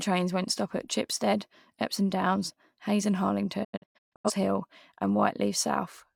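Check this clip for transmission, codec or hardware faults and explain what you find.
One fault is present. From 3.63 to 4.31 s the speech breaks into several short silent holes, each faded over 20 ms, about 430 ms lost in total and the longest gap 128 ms. This is a digital broadcast dropout. The receiver muted frames that failed to decode, which fits around ten lost frames, and the speech carried in them is gone.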